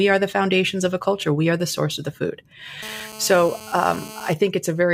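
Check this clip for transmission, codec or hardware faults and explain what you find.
Two hardware interference faults, both from a 2G mobile phone near the audio circuitry.

GSM phone buzz, 2.83 to 4.34 s, starting just after "source of the food": a phone in an active call was transmitting its radio bursts 217 times a second, and the audio electronics rectified them. This produces a hard, raspy 217 Hz buzz full of harmonics, steady throughout and about 16 dB below the speech.

GSM signalling bursts, 4.45 to 4.82 s: a phone in a call but with its user silent sent only short groups of bursts at the same 217 Hz rate. Rectified, these give even ticks with a longer buzz twice a second, much fainter than the speech.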